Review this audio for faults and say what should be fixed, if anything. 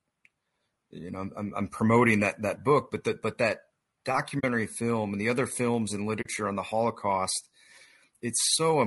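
The whole take has a rough, grainy edge, with noise filling the gaps between the harmonics and a top end that sounds thin and a bit synthetic. That's plainly audible codec damage, likely from low-delay AAC compression such as AAC-ELD. Its short frames can't resolve pitch harmonics well and spend bits inefficiently, and the amount of damage fits a tight bitrate of around 32 kbps. To prevent it, give the encoder more bitrate or use a codec with longer frames if latency allows.

There are two soft-edged holes where the audio fades out and back in, at 4.39 to 4.44 s and at 6.21 to 6.26 s. This is AAC frame loss with muting. Each gap is about 40 ms, which fits two lost frames. The decoder zeroed their spectrum, and the overlapping windows smeared the silence into a brief fade rather than a hard cut. To prevent it, make the transport more robust with redundancy or FEC, or use a decoder with proper concealment instead of muting.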